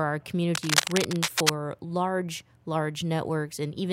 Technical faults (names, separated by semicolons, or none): cable scratch noise